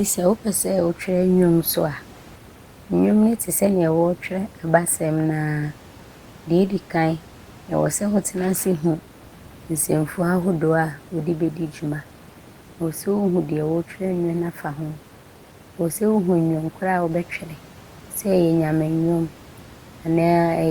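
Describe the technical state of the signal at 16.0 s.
At 16.0 s the speech signal is intact, with only the room's own background noise sitting about 26 dB below the speech.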